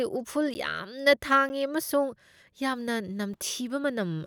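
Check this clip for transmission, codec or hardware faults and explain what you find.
There are three blocks of digital silence in this speech, at 0.54, 1.49 and 3.34 s. The first two are 10 ms long and the last about 3 ms. Each time, the sound cuts out and snaps back with no fade. It comes across as a quick tick rather than an audible hole, which fits the output buffer not being filled in time.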